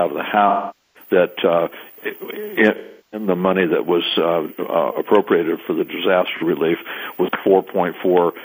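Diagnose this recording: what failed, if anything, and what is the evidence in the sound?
AAC frame loss with concealment at 0.48–1.09 s, 2.76–3.27 s and 6.35–6.43 s, a codec-stage failure. The decoder rebuilt missing frames from the last good spectrum, so the two longer gaps fade toward silence and return, while the brief 6.35 s gap is a smeared patch.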